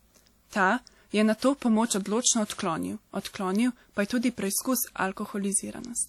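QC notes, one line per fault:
Throughout, WMA compression: a ringing, washy texture runs through the speech, with hiss that swells and fades with the signal, likely from a WMA encode at a bitrate that fits about 48 kbps. Unlike broadband noise, this hiss tracks the speech, and the band still extends to about 20.1 kHz rather than being cut low.
2.45 to 2.50 s, pre-echo: a short hiss, spread over about 50 ms, arrives just before a sharp attack, which sounds softened. The codec spread noise sized for the loud onset across the quiet moment before it. Unlike an echo or reverb tail, this smear comes before the attack, not after it.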